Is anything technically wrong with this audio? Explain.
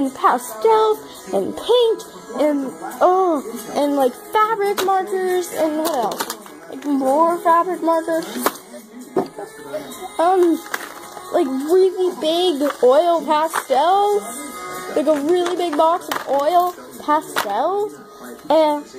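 No, nothing stood out as technically wrong on listening.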